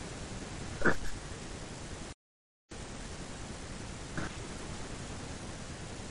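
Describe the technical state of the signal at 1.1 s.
At 1.1 s the signal sits inside a case of frames out of order, running from 0.94 to 1.13 s. Two adjacent blocks of roughly 93 ms each, which fits runs of about four frames, were decoded in swapped order, so that stretch of speech plays second half first. It comes across as a garbled flutter. Unlike a dropout or skip, nothing goes missing and the timing afterwards stays intact.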